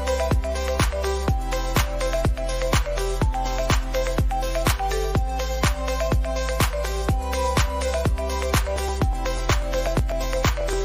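Periodic USB or driver dropouts run from 8.76 to 10.73 s: every 0.123 s a couple of milliseconds of audio is skipped, producing regular ticks.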